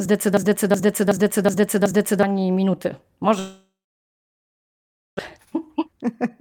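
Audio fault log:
0.37–2.23 s, system hang loop: One 0.37 s slice of speech repeats exactly five times at about 2.69 Hz. This is the pattern of a frozen driver leaving the hardware cycling one ring buffer, and the loop length fits a 16384-sample buffer. The long loop gives a slow machine-gun stutter, and about 2 s of the real speech never plays. The waveform shows identical blocks side by side, and the spectrogram shows the same patch stamped out in a row.
3.39–5.21 s, long network dropout: The last sound is stretched into a fading buzz, and then about 1.5 s of silence follows. The likely cause is a stall in arriving audio, with about 1 s of speech missing. When sound returns, the delay has shifted by roughly 0.7 s. The waveform shows a decaying tail and then a flat line. On a spectrogram, smeared harmonics fade into an empty band before the speech resumes.
5.38–6.33 s, jitter buffer speed-up: The speech runs at about 107 % speed with its pitch unchanged, so it sounds slightly hurried. 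The receiver was draining excess buffered audio by cutting out short pitch-period pieces, about 70 ms in total. The waveform shows periodic cycles spliced tighter together, and the spectrogram shows syllables compressed in time while the harmonic spacing stays the same.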